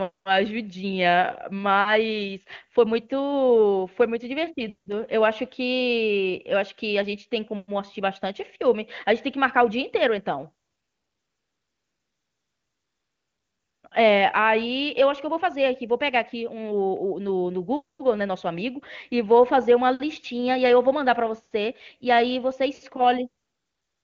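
AMR comfort noise kicks in at 0.11–0.25 s, 10.65–13.83 s, 13.89–13.91 s, 17.97–17.99 s, and from 23.43 s to the end. The phone decided the talker was silent and stopped sending speech frames, so the real background gets swapped for a smooth synthetic hiss that switches in and out. The wideband speech in between sounds clean, consistent with a high-rate AMR-WB mode.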